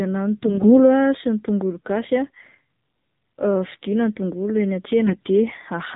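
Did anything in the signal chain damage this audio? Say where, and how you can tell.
Yes. AMR narrowband mobile codec, throughout: the codec stage strips everything above 4 kHz and rebuilds the speech from a pulse-driven vocal-tract model. The audible buzzy, synthetic edge fits a low 7.4 kbps mode, where few pulses per subframe leave the voice thin and artificial.

AMR bit errors, 0.46–0.87 s before "ah sy ny tongolo", and 5.06–5.21 s after "vidiana ny tongolo eny": this is network damage. Flipped low-protection bits misplace the excitation pulses and skew gain and spectral values, so pitch and level hold while the sound turns hoarse, scratchy and gargly.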